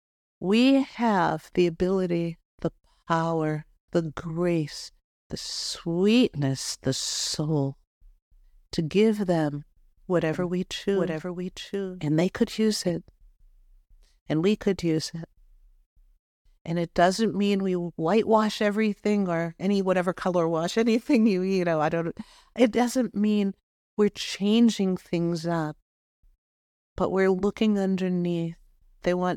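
From 10.34 to 12.90 s, a doubled audio track: a quieter copy lags about a second, likely from a slower second capture path, showing hard-edged duplicate spectrogram patterns.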